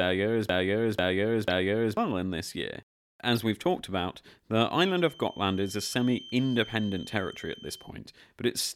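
From the very start of the clip until 1.97 s, the audio is caught in a broken-record loop: a fragment of about 0.49 s plays three times back to back, identical each pass, before normal playback resumes on "in this year". This is likely a stalled player, encoder or stream re-sending the last block it held. Whatever should have been heard during those two seconds is gone, replaced by the repeats.

Inside that loop, at 1.50 to 1.54 s, a corrupt frame decoded produces a short burst of error. Damaged bits in roughly two compressed frames were decoded regardless, so misread gains and codes scatter energy across the wrong frequencies for the duration of those frames. The burst peaks at around -20 dBFS. A second one, spanning roughly three frames at 3.33 to 3.39 s, falls between "in this year" and "we've talked about".

From 4.68 s to 7.95 s, a feedback whistle sits behind the speech. It is a thin, steady tone at 3.1 kHz, around 20 dB below the main signal, that swells and fades slowly in level. 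The likely cause is a loudspeaker-to-microphone path held right at the edge of feedback, so the resonance keeps sounding without building into a howl.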